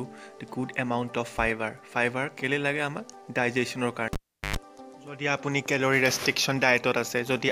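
At 4.13 s, cable pulled and plugged in: a pop, 380 ms of near silence, 110 ms of 50 Hz mains buzz, then a pop at 4.56 s. The buzz marks it apart from a clean dropout.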